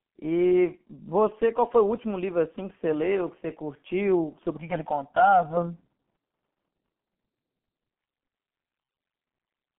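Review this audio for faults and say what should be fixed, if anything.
Throughout the clip the speech sounds muffled and hoarse, with smeared consonants and nothing above about 3.6 kHz. This is G.723.1 codec damage, and it is heavy. The coder works on 30 ms frames and rebuilds the voice from a slowly updated model, so fast articulation blurs. The thin, boxy tone fits a bitrate near 6.3 kbit/s carried over a 150 Hz to 3.4 kHz telephone band. To prevent it, capture or transmit through a wideband codec at a higher bitrate instead of G.723.1.

From 4.57 to 5.57 s the sound turns hollow and phasey, as if heard through a tube. This is channel delay (comb filtering). One channel arrives roughly 1.5 ms late, and when both are summed to mono, the shared content cancels at evenly spaced frequencies. The first notch falls around 400 Hz. To prevent it, keep the channels time-aligned before any mono fold-down, or take a single channel rather than summing.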